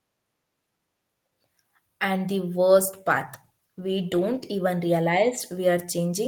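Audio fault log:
2.73–4.57 s, call bitrate drop: speech turns rough and watery for about 1.7 s, consistent with encoder bits falling from roughly 32 to 17 kbps; the spectrogram shows coarser, blotchier detail.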